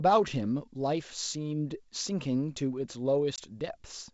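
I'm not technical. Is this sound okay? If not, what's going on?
No. There is packet loss on an ADPCM call at about 3.36 to 3.39 s: one small piece of the speech, about 20 milliseconds, roughly a single packet, went missing and was replaced by a sharp-edged gap of silence. This call coding predicts each moment from the one before, so after the gap the receiving end is briefly out of step, and the speech comes back slightly wrong before settling.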